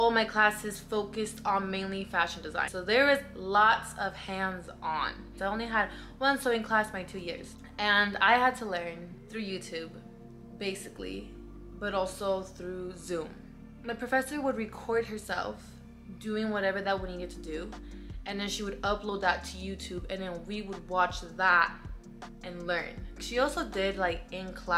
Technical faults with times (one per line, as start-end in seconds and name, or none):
19.80-24.77 resampler restarted on every block